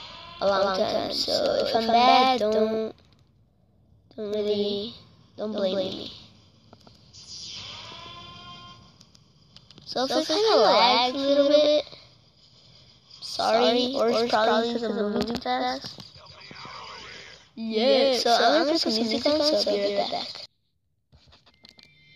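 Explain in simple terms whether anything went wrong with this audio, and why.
The same sound was most likely recorded twice, once through a slower route, and both copies got mixed together. This is a doubled audio track: throughout the clip, a second, equally loud copy trails the original by about 150 ms, giving a hard, clean echo.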